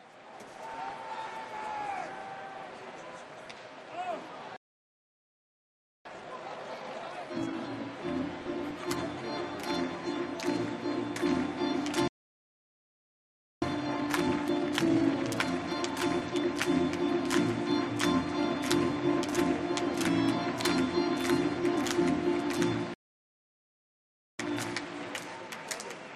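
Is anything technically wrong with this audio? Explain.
Yes. MP2 compression runs throughout, likely at a low rate near 80 kbps. Upper sub-bands drop out, leaving a dull, gurgling, granular sound.

DAB burbling hits at 0.74 to 0.91 s, 3.45 to 3.55 s and 8.41 to 8.71 s. Bit errors corrupt single sub-bands, giving short blips of noise.

Playback stalls silence the sound at 4.56 to 6.05 s, 12.08 to 13.62 s and 22.94 to 24.39 s. Each lasts about 1.5 s, likely from the player running dry.

Time-compressed catch-up follows each stall, at 6.05 to 7.53 s, 13.62 to 16.62 s and 24.39 s to the end. Small pieces are cut out and cross-faded. The sound hurries at normal pitch, at 2.0, 1.15 and 1.1 times speed.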